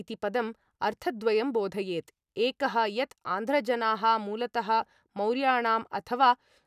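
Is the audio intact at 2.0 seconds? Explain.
Yes, the speech at 2.0 seconds plays through intact, with no dropout, click, distortion or other fault at that moment.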